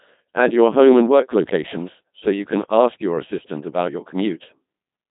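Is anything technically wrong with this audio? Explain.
Yes. Throughout the speech, the Codec 2 vocoder has done heavy damage. Only pitch, voicing, energy and a coarse spectral envelope survive, and the decoder rebuilds the sound from sine waves, giving a robotic, buzzy tone with nothing above 3.8 kHz. The sound points to a rate around 2.4 kbit/s.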